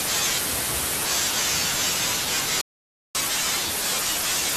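The player most likely ran short of buffered data, or its output thread was held up, at 2.61 s. This is a playback stall: the speech cuts off mid-flow and the output sits in silence for about 0.54 s, until 3.15 s. The gap is long enough to hear as a clear hole in the speech, not a click or a brief dropout, and the sound then resumes from where it stopped.

From 3.15 s to the end of the clip at 4.57 s, the player works through its backlog with catch-up at higher speed. It resamples the queued audio to run at 1.1 times normal rate and win back the time lost in the stall. Because resampling shifts speed and pitch together, the speech after the gap sounds both hurried and raised, by roughly one and a half semitones, for the rest of the clip.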